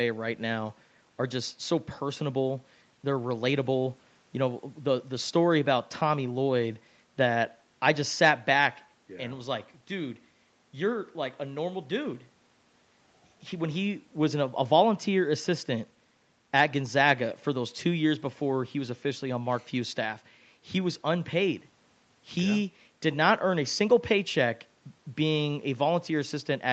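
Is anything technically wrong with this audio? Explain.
No, nothing in this speech stood out as a technical problem on listening, and the top end stopping at around 8 kHz is simply the normal bandwidth of the call path it went through.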